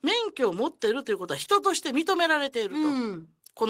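At 0.85 to 0.87 s a single loud pop sits on top of the speech, peaking a few decibels above it. A sudden voltage step, likely from a switch, plug contact or static discharge, entered the chain, and the speech continues unbroken beneath the thump.

From 1.43 to 1.48 s there is a short concealed packet loss. About 20 ms of audio never arrived, and the receiver filled 24 ms by extending the preceding sound before blending back, leaving a brief smear in the speech.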